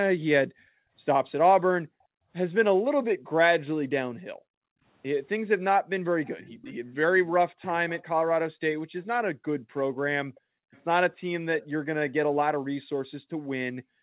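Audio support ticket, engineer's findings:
Background gated by the echo canceller. Room tone between speech suddenly dips, then returns. At 0.48–0.93 s, 1.9–2.29 s, 4.15–4.83 s, 10.4–10.72 s, and from 13.2 s to the end. Mic-side AEC suppressor ducking the microphone hard, about 40 dB at its deepest, while far-end audio plays, releasing once playback stops.

Echo leak. Faint delayed copy of the speech trailing about 417 ms behind. At 6.28–6.72 s (about 25 dB below speech), 7.62–8.03 s (about 20 dB below, most audible), and 10.35–10.82 s (about 35 dB below, barely there). Likely a loudspeaker endpoint whose echo canceller left residual echo and sent it back.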